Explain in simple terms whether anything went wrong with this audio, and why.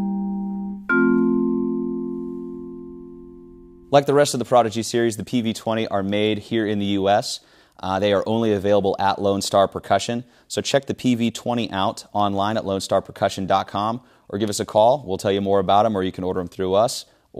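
Nothing went wrong with this audio that a listener can hear. The sound stays steady throughout, with nothing that points to a problem in how it was recorded or passed along.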